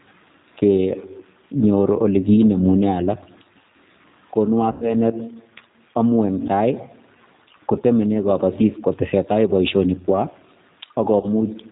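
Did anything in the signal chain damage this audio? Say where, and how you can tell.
Yes. At the codec stage, the whole clip carries G.729 damage. Nothing reaches above 4 kHz, and the speech has a rough, slightly synthetic texture. That comes from rebuilding each 10 ms frame out of a vocal tract filter and a few pulses, which fits an 8 kbit/s link.

At the network stage, VoIP packet loss concealed by the speech codec appears at 4.72–4.94 s and again at 11.20–11.28 s. Lost frames left gaps of about 90 ms and 30 ms. The decoder stretched its last pitch and filter into a sound that fades, and the speech stays weak briefly afterwards.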